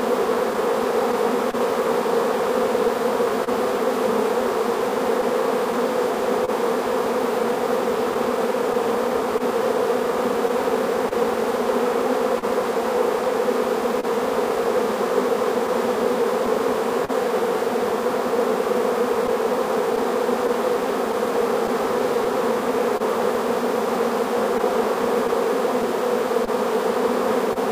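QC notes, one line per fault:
Throughout: clock drift between sender and receiver. The sender's clock runs roughly 1.5% slow. The receiver's jitter buffer keeps draining, so short pieces are repeated to keep pace. This causes small timing hiccups at uneven intervals across the whole clip.
0.53–17.11 s: scattered short gaps. Around twenty isolated packets arrive lost or late. The receiver covers each hole by continuing the preceding sound, about 300 ms in total. These are heard as ticks and smears, the longest near 40 ms, with clear audio between them.
19.27–27.58 s: scattered short gaps. About ten more lost or late packets are filled by extending the last sound, roughly 150 ms altogether. Each patch is heard as a brief tick or smear, the longest near 30 ms, separated by clear stretches.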